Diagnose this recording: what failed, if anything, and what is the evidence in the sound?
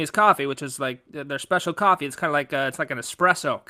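Nothing in the signal chain has failed: the speech recording carries no audible defect at any stage, from capture through to playback.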